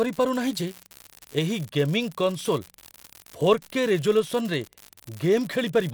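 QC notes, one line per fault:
throughout, unreliable data bit: one marginal data line flips its bit in random samples, making equal-sized spikes heard as steady crackle, even in pauses; waveform shows uniform spikes, spectrogram broadband speckle.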